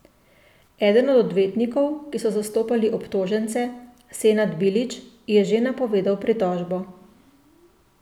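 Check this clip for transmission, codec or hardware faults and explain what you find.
No faults can be heard anywhere in the speech.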